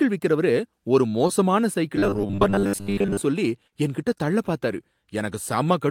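From 1.96 to 3.20 s, just before "சொல்லி என்கிட்ட தள்ள பார்த்தாரு", audio likely arrived too slowly, so most of it was replaced by repeated short buffers. This robotic sound carries a rigid 100 Hz buzz, which fits a 10 ms buffer. At 3.67 to 3.74 s, before "என்கிட்ட தள்ள பார்த்தாரு", about 40 ms failed to arrive. Short concealed packet loss filled 45 ms by extending the preceding sound, leaving a brief smear.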